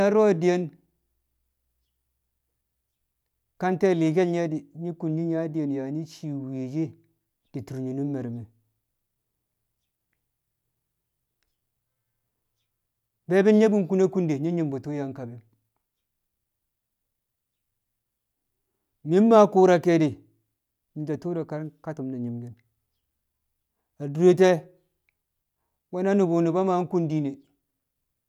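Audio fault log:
No faults detected in this speech recording.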